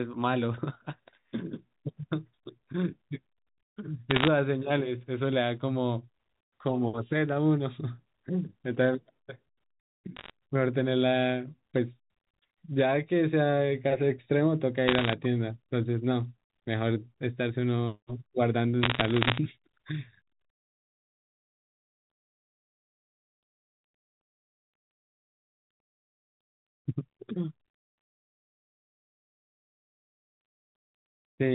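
Bit errors on a digital phone line crackle through the speech at 4.11–4.28 s, 10.16–10.30 s, 14.88–15.13 s and 18.83–19.38 s. Flipped bits corrupt single samples, giving sharp ticks, unlike dropouts, because the speech underneath never gaps.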